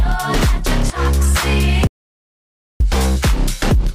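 At 1.87 s the sound cuts off abruptly and stays dead until 2.80 s, an audio dropout to silence lasting about 0.93 s. The gap holds no room tone at all, only silence, which points to a likely loss of the input signal while recording continued. On a waveform this shows as a flat line between two hard edges; a spectrogram shows a dark vertical band across the frequencies.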